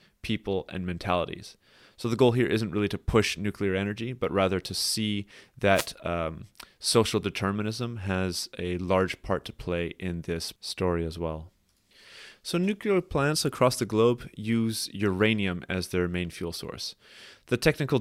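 At 5.73 to 5.88 s, just after "but rather to see" and before "um social determinism has", a wireless microphone noise hit: the FM radio link fades, receiver hiss surges into a brief swish over the speech. A spectrogram shows a broadband vertical smear.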